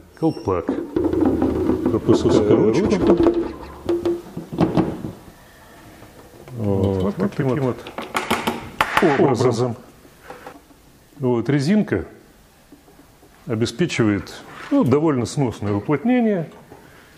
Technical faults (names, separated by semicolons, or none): doubled audio track